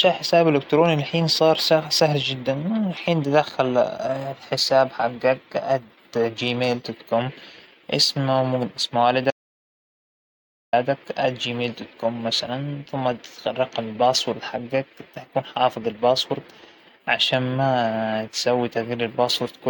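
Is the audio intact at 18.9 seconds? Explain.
Yes, the audio is intact at 18.9 seconds, with no fault audible at that moment.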